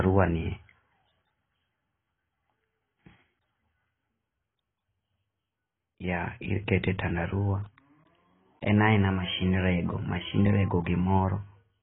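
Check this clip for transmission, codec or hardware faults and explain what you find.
One codec fault affects the whole recording.

AAC compression, throughout: the likely cause is AAC-LC at a bitrate that fits about 16 kbps. It quantises the spectrum coarsely and lowers the cut-off, leaving speech with nothing above 3.8 kHz, heavily dulled and warbly.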